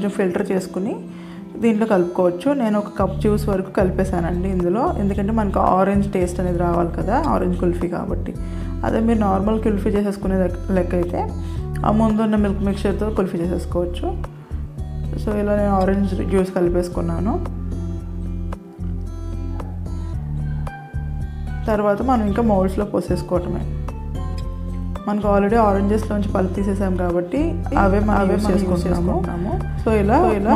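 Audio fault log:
27.72 to 30.55 s, doubled audio track: a second copy of the sound cuts in abruptly and runs to the end, trailing by roughly 400 ms and a few dB quieter, full-band and dry, so likely a slower capture path or misaligned edit.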